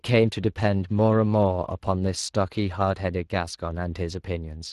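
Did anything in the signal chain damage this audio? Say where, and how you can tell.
Yes. Across the whole clip the speech has a grainy, hoarse texture, and the damage is plainly audible. The stage is the codec: Speex compression, whose CELP excitation is coded with too few bits to rebuild the voice cleanly. This fits a Speex stream around 22 kbps.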